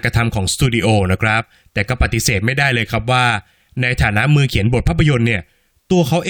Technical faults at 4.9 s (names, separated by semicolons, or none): loose connector crackle